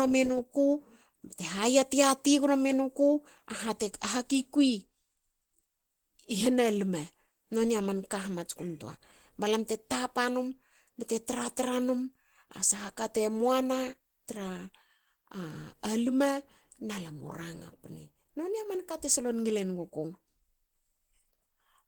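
Throughout, Opus compression leaves the speech plainly muffled and hoarse. It is likely the codec's hybrid speech mode, which fits a bitrate near 16 kbps.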